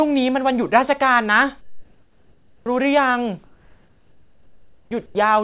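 From 1.61 to 2.66 s, 3.44 to 4.91 s and 5.06 to 5.15 s, comfort noise replaces the background. Discontinuous transmission is the likely cause. Flat synthetic hiss sits about 6, 3 and 10 dB below the real background. Each gap ends with the onset clipped by the voice detector, at 2.64 to 2.66 s, 4.88 to 4.91 s and 5.12 to 5.15 s. The likely cause is slow voice detection, and the first 20 to 30 ms go missing. Speech starts abruptly. Throughout, the call codec leaves nothing above 4 kHz.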